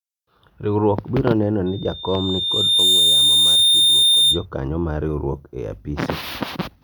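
From 1.66 to 4.46 s, loudspeaker feedback squeal: a 3.6 kHz tone swells over about a second to roughly 10 dB above the speech, drawing a bright horizontal line on the spectrogram.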